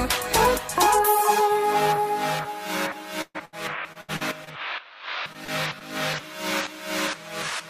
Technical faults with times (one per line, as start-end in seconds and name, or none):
3.21-3.54 burst of packet loss
3.92-4.49 repeated packet loss (robotic sound)
5.33-5.50 short concealed packet loss
5.79-5.82 short concealed packet loss